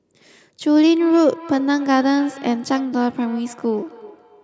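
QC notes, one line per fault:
1.0–4.4 s, feedback echo between two devices: the speech returns roughly every 0.3 s, peaking about 19 dB below the direct sound. A second nearby device replays this microphone's feed back into it, and the local echo canceller cannot remove audio it never played.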